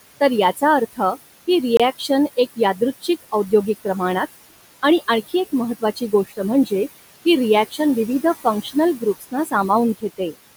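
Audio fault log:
Throughout: noise suppressor artifacts. The room noise, about 15 dB under the speech, is pushed down by about 19 dB between phrases and swells back beneath them. On a spectrogram the noise floor pumps with the speech.
0.93–1.48, 1.99–3.53, 4.83–5.34, 5.79–6.72, 7.70–7.80, 8.45–9.70 and 10.01–10.37: speech cut by the noise suppressor. Quiet stretches of speech, from a tenth to under half a second each, were treated as noise and turned down by about 15 to 20 dB, so they sound swallowed. The waveform shows abrupt dips, and on a spectrogram the speech energy there is faint.
1.77–1.80: Bluetooth stall. The sound drops to silence for 26 ms and then picks up again. The likely cause is the headphone buffer running dry while delayed wireless packets were resent. The waveform shows a flat gap with hard edges, and the spectrogram shows a thin, fully blank vertical strip.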